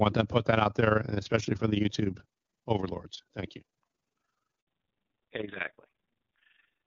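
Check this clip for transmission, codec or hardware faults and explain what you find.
Three faults are present: a constant flutter, a brief dropout, and a loss of high frequencies late in the clip.

Overlap-add ripple runs through the whole clip. Framed audio was rejoined with mismatched overlaps. The level pulses about 11 dB at around 20 Hz, giving a rough tremolo.

A handover gap runs from 4.61 to 4.67 s. During a network switch no speech frames arrived. The speech cuts out for 60 ms, and that stretch is lost.

Fallback to narrowband starts at 4.67 s and lasts to the end. The call drops from wideband HD Voice to a narrowband codec. Nothing remains above 4 kHz. Speech turns dull and rasping, which fits a low-rate mode near 5.9 kbit/s.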